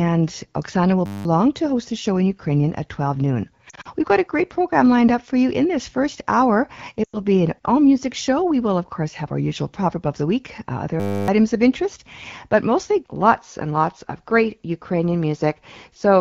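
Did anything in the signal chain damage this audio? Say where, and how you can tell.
Yes. Two faults are audible.

System hang loop, at the driver or buffer stage: at 1.06 to 1.25 s, just before "to host the show", and at 11.0 to 11.28 s, before "of interest but mostly", the sound becomes a steady 100 Hz buzz. That fits a 10 ms ring buffer replaying while the system froze, losing about 0.2 and 0.3 s. On the waveform the same 10 ms cycle repeats identically. On the spectrogram it shows as flat harmonic stripes every 100 Hz.

Lost AMR speech frames, on the radio or network link: at 3.69 to 3.88 s, with losses scattered over 160 ms (the longest run is 40 ms), and at 7.03 to 7.17 s, between "in this first hour" and "be an all music", the speech warbles, smears and briefly fades. About 100 ms is lost each time. The decoder is stretching the last good frame with falling gain, which shows on the spectrogram as frozen formant bands that dim before speech resumes. 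The AMR-WB coding around these points sounds clear, with only light codec colouring.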